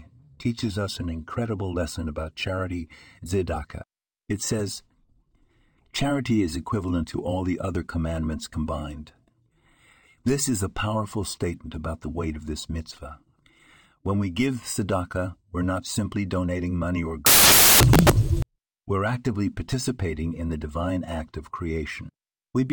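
A speech recording in which, from 17.26 to 18.42 s, right after "simply donating money or", the decoder assembles each sample from the wrong bytes, misaligned by a byte or with the byte order swapped. That promotes the rapidly fluctuating low-order bits into the most significant part of every value, so for about 1.2 s the speech is replaced by loud, harsh broadband noise.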